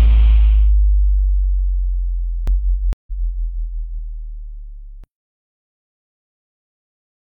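The audio has a doubled audio track from 2.47 to 5.04 s: a second full-band copy at roughly equal level trails about a second behind, likely from a slower capture path. There's also a stream reconnect at 2.93 to 3.13 s. The sound drops out for 142 ms, then a fresh decoder picks up roughly 150 ms further on.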